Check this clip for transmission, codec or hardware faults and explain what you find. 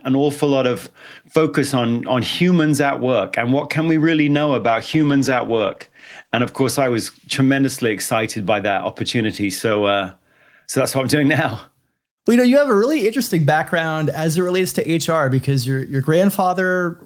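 One transmission fault: a call bitrate drop from 4.63 to 7.79 s. The speech turns coarse and muffled for about 1.85 s at its worst, fitting an encoder cut from about 32 to 15 kbps, then recovers. Unlike packet loss, there are no gaps or clicks, only a smearing of the sound.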